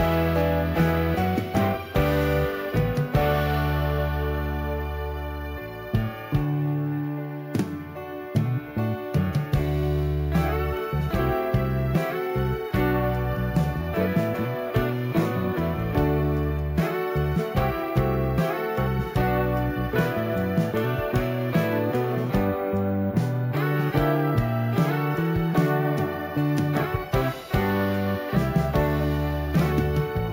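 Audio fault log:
throughout: imaging from sample-and-hold upsampling. The rate was raised by holding each sample for several output samples rather than interpolating through a smoothing filter, which points to a 16 kHz original brought up to 48 kHz. The stepped waveform folds mirror copies of the spectrum above the old band, the first lying between 8 and 16 kHz at about 25 dB below the signal, heard as a metallic fizz that rises and falls with the sound.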